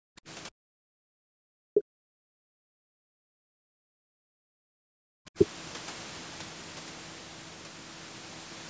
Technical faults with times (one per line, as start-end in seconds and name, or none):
0.00-0.21 speech suppressed in double talk
0.51-0.99 background gated by the echo canceller
1.24-2.34 speech suppressed in double talk
2.62-3.23 background gated by the echo canceller
3.51-5.38 speech suppressed in double talk